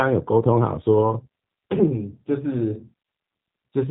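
From start to finish the speech sounds rough and faintly synthetic, with a boxed-in, telephone-like dullness because nothing above 3.8 kHz comes through. These are plainly audible G.729 codec artefacts. Instead of carrying the waveform itself, the codec rebuilds each 10 ms frame from a vocal tract filter, a pitch predictor and a few sparse pulses. That lean model strips out fine detail and leaves the grainy texture, at a rate that fits an 8 kbit/s G.729A stream.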